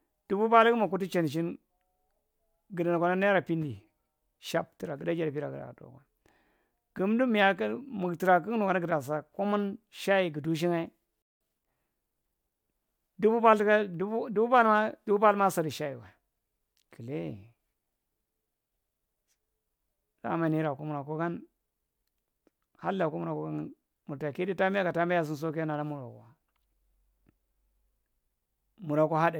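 A speech clip with a playback stall at 11.22 s: the talking just stops dead for about 190 ms, until 11.41 s, most likely because the player ran dry of data or its thread got held up. Right after, from 11.41 to 11.77 s, there's time-compressed catch-up. The player chews through its backlog by snipping and cross-fading small slices, so the speech runs at 1.5 times speed with the pitch unchanged.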